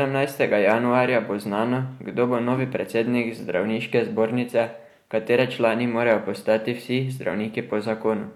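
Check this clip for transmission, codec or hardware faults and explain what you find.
Nothing stood out on listening to this speech recording.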